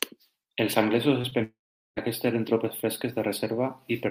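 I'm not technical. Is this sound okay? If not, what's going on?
No. At 1.21 to 1.25 s and again at 1.29 to 1.33 s, the second time just after "anglesos es", the speech briefly smears or wobbles. This is short concealed packet loss: tiny bits of the call arrived late, and the receiver patched over them.

From 1.43 to 1.98 s, the sound fades into a brief buzz or hiss and then about 0.4 s of silence before "aquests eren tropes". This is likely a long network dropout, and the words in that gap are lost.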